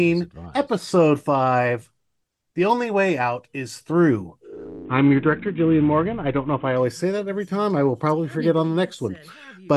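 From 4.85 s to 6.76 s the sound passes through a Bluetooth SBC bit pool drop, as the link, under strain, cut the encoder's bit allocation hard, which fits a fall from a bit pool near 28 to about 5, roughly 54 kbps. Starved of bits, the upper sub-bands go empty and the rest are coarsely quantised, so the treble dulls and gritty noise rises. A spectrogram shows the top band abruptly blanked for those two seconds, with speckled noise below.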